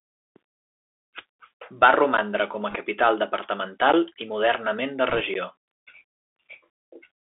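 It's a speech recording that's come through a Bluetooth CVSD headset codec, so the whole thing sits in a narrow band from about 250 Hz to 3.5 kHz. The one-bit delta coding is plainly audible: a grainy hiss under the voice, scratchy s sounds, and roughness wherever loud high content outruns the adaptive step. There are three blocks of digital silence at about 2.17, 3.92 and 5.34 s, each a hard dropout of roughly 11.6 ms, short enough to come across as a tick or dip rather than a gap. That length fits a 512-sample buffer the playback side didn't fill in time. On top of that, bit errors on the Bluetooth voice link show up from 2.70 to 2.75 s and from 5.10 to 5.21 s. Flipped bits at a couple of percent add a rushing crackle over the speech rather than sharp pops, because each CVSD bit carries so little weight.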